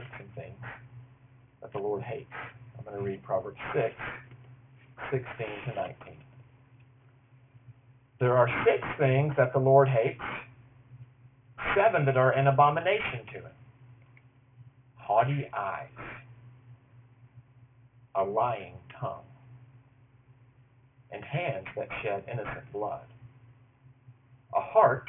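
Aliasing runs through the whole clip. The band stops hard at 3 kHz, which fits resampling down to a 6 kHz rate without an anti-alias filter. Content above that edge folds back to unrelated frequencies, roughly 15 dB below the signal, giving a gritty, metallic edge.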